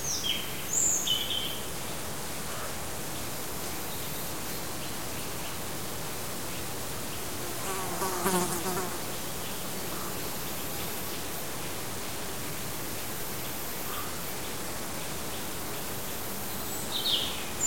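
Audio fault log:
throughout, low bit depth without dither: gritty distortion nearly as loud as the sound tracks it and cuts out in quiet parts, unlike steady hiss; fits likely truncation to 5 bits.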